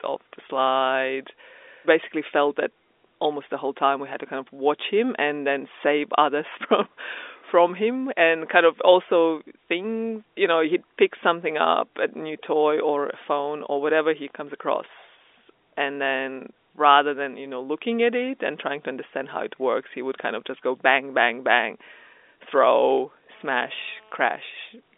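From 23.35 to 24.23 s, GSM phone buzz: a nearby 2G phone's rectified 217 Hz bursts, about 32 dB under the speech, rasp rather than hum like 50 or 60 Hz mains.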